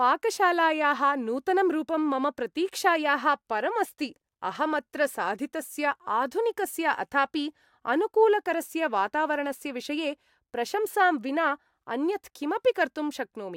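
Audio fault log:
No technical faults can be heard anywhere in this speech recording, and the signal holds steady with no audible disruption.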